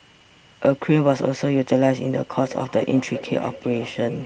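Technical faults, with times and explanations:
2.33 to 4.26 s, feedback echo between two devices: from here to the end, the sound returns at a fixed interval of roughly 0.4 seconds, peaking about 15 dB below the speech, and each return is thinner and more ringing. A second device in the room replays this microphone's signal, the microphone captures it again, and neither device's echo canceller removes sound played by the other. Room reverberation would be a smooth decay, not discrete, evenly spaced repeats.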